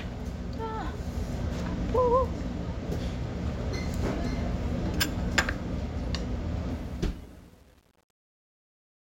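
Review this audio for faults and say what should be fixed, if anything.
Truncation distortion on the fade-out runs from 6.70 s to the end at 9.04 s, and it is worst from 6.88 s on. The fade keeps too few bits, which fits roughly 9-bit resolution. The quiet tail turns into coarse steps and sounds gritty. Fix it by running the fade at full resolution and adding dither before any reduction in bit depth.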